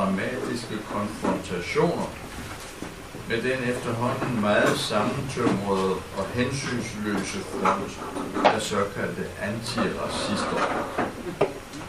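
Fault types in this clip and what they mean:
No faults can be heard anywhere in this recording.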